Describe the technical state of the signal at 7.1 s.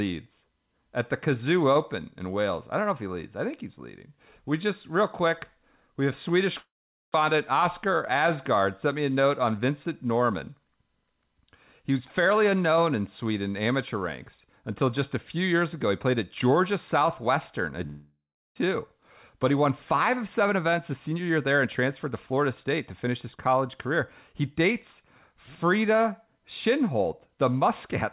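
At 7.1 s the signal is inside a long network dropout running from 6.58 to 7.16 s, likely caused by packets failing to arrive. The receiver stretches the last sound into a fading buzz, then leaves near-silence for about 430 ms. When the band-limited call audio, with nothing above 4 kHz, resumes, about 0.4 s is gone and timing has shifted by roughly 150 ms. That loss and shift set it apart from a brief concealed packet glitch.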